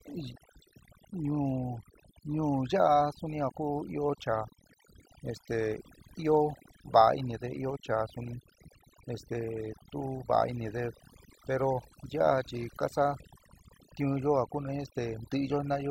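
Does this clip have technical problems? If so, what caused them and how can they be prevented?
Yes. Overdone noise removal runs through the whole speech clip. A noise reducer set too strong cuts single frequency bands near its noise estimate, leaving near-silent pauses full of twinkling specks. A noise gate would mute everything at once, not band by band. Use a gentler reduction setting and check quiet passages before applying it.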